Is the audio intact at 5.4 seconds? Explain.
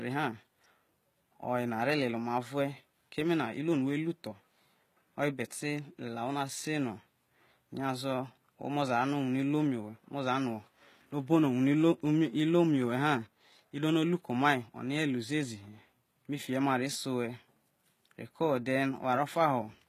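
No, not really. At 5.4 seconds, as across the whole speech clip, the treble sounds rebuilt rather than real, likely from HE-AAC compression at a low rate around 20 kbps. Upper bands copied from below don't line up harmonically, so s sounds come out gritty and lispy, with nothing above 14.9 kHz.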